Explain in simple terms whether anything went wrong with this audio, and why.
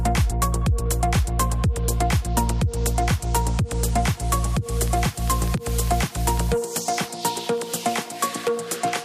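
Periodic USB or driver dropouts run from 4.88 to 8.98 s: every 0.1 seconds, something in the computer briefly stalls the audio connection, and a tiny sliver of sound, far less than a millisecond, drops to silence. About forty of these slivers produce a steady ticking.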